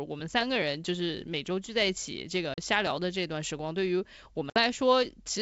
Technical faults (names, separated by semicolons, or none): packet loss on an ADPCM call